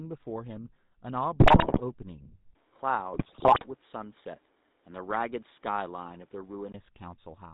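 From start to finish the speech carries the sound of the GSM full-rate codec, plainly audible and consistent with the 13 kbps full-rate mode. The codec rebuilds the signal from a vocal-tract filter fed by a coarse, regularly spaced pulse excitation, so the voice has a buzzy, gravelly edge. Nothing above 4 kHz gets through, leaving it dull and band-limited.

From 1.4 to 1.82 s, and again from 3.13 to 3.67 s, GSM bit errors break up the sound. Corrupted bits reached the decoder and scrambled its filter, pitch and gain parameters frame by frame, which bends the spectrum and throws the level around. The speech turns into squawks, pops and gargling. The second burst lasts longer, and the density of damage in both points to a heavily degraded radio link.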